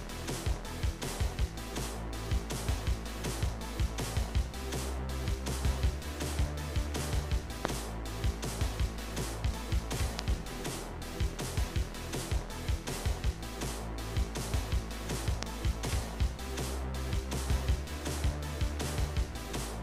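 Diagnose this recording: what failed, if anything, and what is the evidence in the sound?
Loud pops at 7.65, 10.19 and 15.43 s: single sharp pulses about 25 dB above the sound, likely voltage steps from an intermittent analogue wiring connection.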